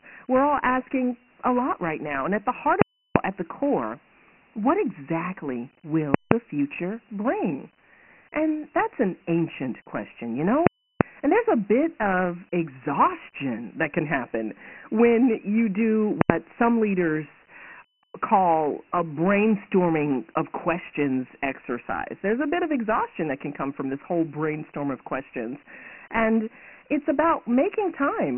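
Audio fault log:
throughout: Dialogic VOX ADPCM. Coarse 4-bit coding, consistent with 24 kbps at 6,000 samples a second, leaves nothing above 3 kHz and heavy gritty hiss riding the speech.
2.82–3.16 s, 6.14–6.32 s, 10.67–11.01 s, 16.21–16.30 s: invalid numbers at full scale. Broken calculations pinned each block at one extreme value, giving loud pops at both edges with silence between, lasting about 340, 170, 340 and 85 ms.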